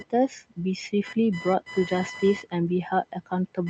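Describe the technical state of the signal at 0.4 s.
At 0.4 s the noise suppressor is misjudging the speech. Between 0.29 and 0.58 s it treats part of the speech as background and pulls its gain down together with the room noise, by about 14 dB at the deepest point. The attenuated portions add up to about a tenth of a second. Soft consonants and low-level parts of the speech there sound swallowed or suddenly faint instead of trailing off naturally.

Computer activity noise runs under that same moment and the whole clip. Load changes in the computer disturb the ground shared with the audio circuit and inject a pulsing interference that repeats at around 1 kHz, roughly 15 dB below the speech. It comes across as a buzzy, chirping whine. It follows the machine's activity rather than the speech, so it stays present even through the quieted stretch.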